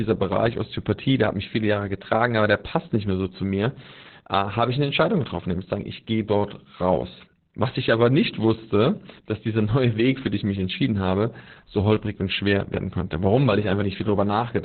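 Throughout the clip, Opus voice compression running its SILK speech coder at a very low rate, which fits about 8 kbps, has cut the band to narrowband, leaving nothing above 4.2 kHz. The coarsely coded excitation makes the speech muffled, hoarse and faintly robotic.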